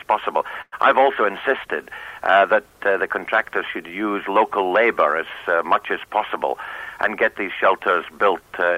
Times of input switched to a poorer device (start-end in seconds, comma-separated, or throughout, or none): none